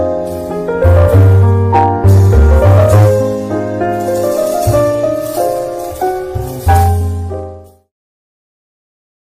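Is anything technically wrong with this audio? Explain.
Yes. Hard clipping appears at 0.83–3.15 s (about 9 dB over), 6.68–6.91 s (about 7 dB) and 7.34–7.43 s (about 1 dB), the last two falling within the fade-out that ends near 7.9 s. Peaks exceed what a stage can pass and are flattened, adding high harmonics that are heard as harsh fuzz first, then lighter crackle.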